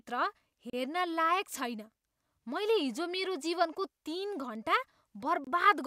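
Speech, with two brief dropouts to silence, at 0.70 to 0.73 s and 5.44 to 5.47 s. A Bluetooth stall is the likely cause.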